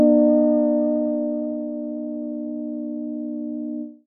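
No technical faults can be heard anywhere in this recording.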